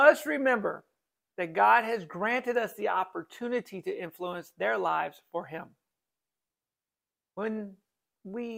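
No technical fault can be heard anywhere in this audio. There is nothing to place at a particular time and no cause to point to.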